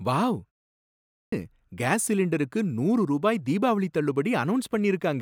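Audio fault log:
0.85–1.32 s, clipped start after a pause: the output device slept through a 0.42 s silence and took 474 ms to wake, so "கேஸ் சிலிண்டருக்கு நூறு ரூபாய்" bursts in missing its opening.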